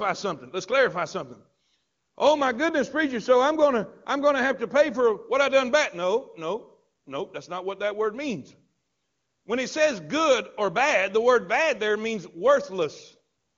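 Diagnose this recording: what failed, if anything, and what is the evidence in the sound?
No stage in the chain has failed in this recording. The speech has passed through the AMR wideband (HD Voice) codec, and its clear, unroughened character fits that codec's highest rate rather than its raspy low ones.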